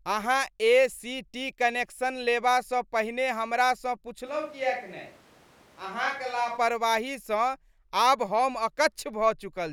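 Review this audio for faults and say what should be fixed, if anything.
From 4.28 to 6.56 s, right after "लेबासँ पहिने हमरासँ", the speech turns roomy and hollow with thinner bass, most likely a switch to a distant microphone. The level drops about 5 dB and room noise rises to roughly 25 dB below the speech. On the waveform the envelope steps down abruptly at the start and back up abruptly at the end. On the spectrogram the low end thins, the noise floor lifts and reverberant tails smear between syllables. To prevent this, record a backup of the close microphone and check that its signal reaches the mix for the whole take.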